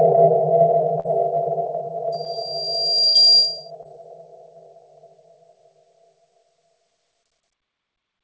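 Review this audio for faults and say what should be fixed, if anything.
A burst of packet loss hits at 1.00 to 1.06 s and 3.07 to 3.17 s. The last sound is stretched and fades, then resumes with a chunk skipped, so it is longer than the brief smears. Prevention: a deeper jitter buffer and forward error correction would cover these runs of lost packets.

A loudspeaker feedback squeal runs from 2.12 to 3.71 s. A single 4.8 kHz tone swells over about a second to roughly 10 dB above the sound, which marks it as a self-sustaining loop rather than a steady interfering tone. Prevention: acoustic echo cancellation or moving the microphone away from the speaker would break the loop.

Short concealed packet loss appears at 2.24 to 2.27 s and 3.83 to 3.86 s. Each is a brief smear or wobble lasting a few hundredths of a second, without the fading tail of the burst losses. Prevention: modest jitter buffering with packet-loss concealment and a steadier network would reduce these glitches.

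The G.722 call path leaves nothing above 8 kHz.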